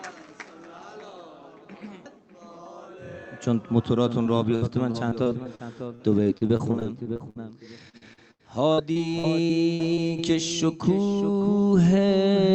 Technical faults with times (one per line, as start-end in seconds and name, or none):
4.23-7.37 repeated packet loss (robotic sound)
7.89-10.20 repeated packet loss (robotic sound)